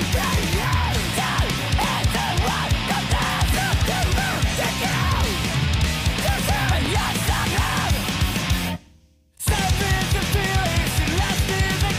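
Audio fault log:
1.82–1.84, 4.34–4.36, 6.86–6.88 and 9.38–9.40 s: overlapping chunks. The audio was handled in 2.5 s blocks, each starting slightly before the previous one ended, so a 20 ms slice replays at every join, giving a short stutter that recurs at a steady rhythm.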